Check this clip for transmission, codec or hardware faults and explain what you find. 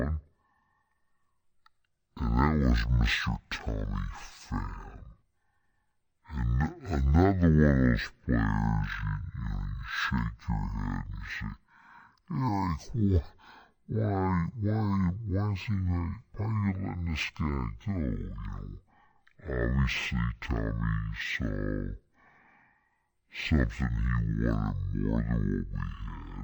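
There is one fault, and it runs through the whole clip: stereo read as mono. From start to finish, the speech plays at half speed and sits a full octave low. A stereo file stores left and right samples interleaved. Here they have been taken one after another as a single channel, so each moment of sound spans twice as many samples. That doubles the duration and halves every frequency. A faint mirrored copy also shows up in the upper half of the spectrum.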